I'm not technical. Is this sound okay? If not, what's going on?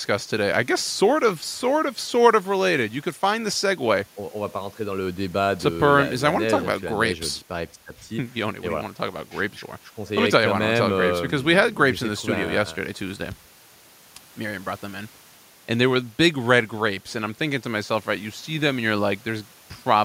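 Yes, the recording's technical signal holds up the whole way, with nothing in the sound itself that points to a recording or playback problem.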